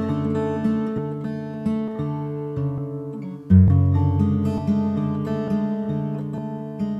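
At 0.98, 1.88, 2.78, 3.68, 4.58, 5.48 and 6.38 s the sound skips forward abruptly, with no gap of silence. This is audio missing between chunks: each time, roughly a tenth of a second is lost and the two sides are butted together. The joins fall every 0.9 s in playback, which fits 1-second chunks with that short piece dropped at each changeover, likely while the processor closes one block and opens the next.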